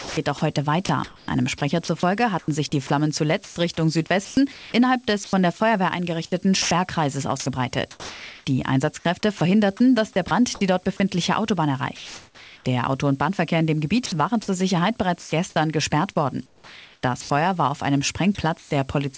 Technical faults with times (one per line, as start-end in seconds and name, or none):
0.00-5.60 sound chopped by the voice detector
6.62-9.41 sound chopped by the voice detector
10.28-10.31 sound dropped by the voice detector
11.96-12.65 sound dropped by the voice detector
14.06-15.32 sound chopped by the voice detector
16.46-17.30 comfort noise in place of the background
18.35-19.17 sound chopped by the voice detector